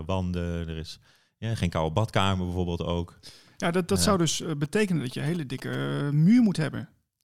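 From 4.64 to 5.75 s, right after "dat zou dus eh", a galloping dit-dit-dit of short buzzes cuts across the speech, sitting roughly 20 dB below it. These are GSM signalling bursts: a nearby 2G phone sends brief clusters of radio bursts while it signals with the network, and the audio circuitry rectifies that radio energy into sound. The buzz inside each cluster repeats at 217 Hz, the burst rate of the phone's transmissions.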